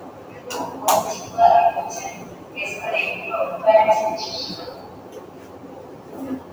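What you've got here is a recording of everyday sounds run through a noise suppressor built for speech, so the noise suppressor applied to music or sounds treats the steadier, held parts as noise. Levels swing by something like 15 dB, with onsets getting through while sustains and tails get pushed down, which gives it that pumping, thinned-out feel. On top of that there's sound cut by the noise suppressor, dropping by about 6 dB from 0.0 to 0.47 s, 2.17 to 2.57 s and 4.74 to 6.17 s, where the suppressor clamps down harder and lingering decays get chopped short.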